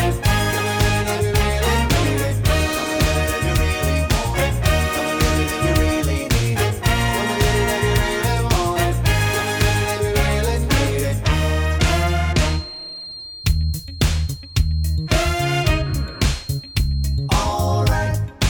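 From 12.35 s to 17.38 s a thin, steady whistle at 4.2 kHz sits roughly 20 dB under the sound, swelling and fading slowly in level. This is a feedback whistle, likely from a loudspeaker-to-microphone loop held just at the edge of oscillation, sustaining one tone without running away.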